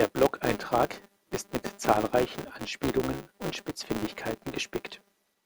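From start to finish, the speech carries a filter restarted on every block: the filter discards its memory at each block boundary and starts again from silence, leaving a small transient every 5 ms. The result is a steady 200 Hz buzz riding under the speech, rising and falling with its level. On a spectrogram it appears as horizontal lines at 200 Hz and its multiples; on the waveform, as tiny regular spikes at each boundary.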